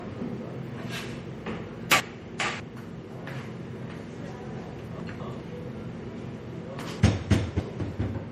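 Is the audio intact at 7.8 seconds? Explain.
No. The span from 7.0 to 7.8 s has chunks out of order: one 200 ms chunk was delivered late and plays three chunks after its proper place. Nothing is missing, but the order is scrambled and there are three hard joins, so the moment up to 7.8 s sounds jumbled and garbled.

This moment, like the rest of the clip, also carries low-bitrate audio saved at a high bitrate. The smeared, swirly MP3 artefacts likely come from an earlier encode at around 48 kbit/s. Saving it again at a high bitrate enlarged the file but could not restore the detail the first pass discarded.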